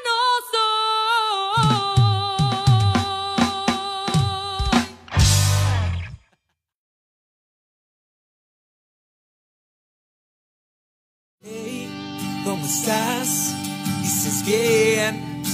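No technical faults can be heard anywhere in the audio.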